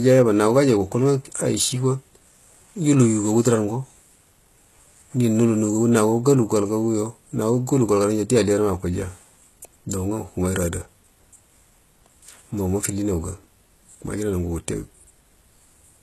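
From start to finish the speech carries HE-AAC compression damage that is plainly audible, likely from a very low bitrate around 16 kbps. Nothing sounds above 12.3 kHz. Unlike a plain low-pass, sibilants turn gritty and metallic because that upper band is rebuilt from copied lower bands.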